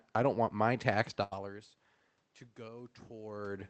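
Right after "don't want my tax", at 1.23 s, there's a burst of packet loss. The receiver stretches the last bit of sound for about 80 ms, fading it out, then jumps ahead, so roughly 80 ms of speech is simply gone when it resumes at 1.33 s.

From 2.56 s to the end, you hear automatic gain rising. The input level dropped by about 20 dB, and the gain control reacts by slowly pushing its gain back up, so the voice and the room noise swell together over that last second or so.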